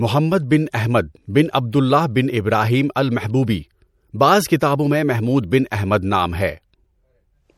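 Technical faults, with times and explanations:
Throughout: MP3 compression. The speech has a watery, swirling quality with plainly audible codec damage, and nothing is present above 19.6 kHz. Weak frequency lines drop in and out from frame to frame, likely from MP3 encoding at a rate that fits about 64 kbps.
5.70 s: pre-echo. A brief smear of hiss, about 12 ms long, arrives just ahead of a sharp attack, which sounds softened. The codec spreads its quantisation noise across the whole transform block, so noise sized for the loud onset leaks into the quiet moment before it.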